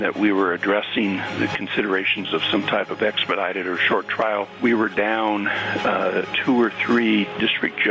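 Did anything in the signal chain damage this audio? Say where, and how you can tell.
Yes. Gain pumping runs through the whole clip, at the input gain stage feeding a fast limiter. The gain swings by around 15 dB. Loud and soft passages sit unnaturally close in level. The likely cause is input gain set far too high, with the limiter clamping each peak. On a waveform the envelope looks flattened. A spectrogram shows all energy below the 8 kHz limit of the call path.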